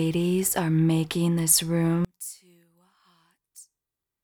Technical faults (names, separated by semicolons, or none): one channel inverted